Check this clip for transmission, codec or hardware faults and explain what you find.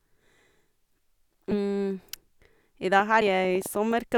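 Two kinds of fault turn up in this speech recording: skipped compressed frames and a train of clicks.

At 1.51 s and 3.21 s, compressed frames are skipped. The decoder dropped about one 20 ms frame, then about two, so the speech jumps ahead.

From 3.00 to 3.92 s, a train of clicks ticks unevenly over the speech, around seven pops at roughly 7.3 per second, peaking a few dB above it. The likely cause is interference or a faulty connection.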